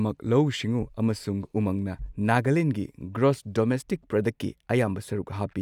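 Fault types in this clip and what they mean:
Listening through the speech, nothing stood out as a technical problem at any point.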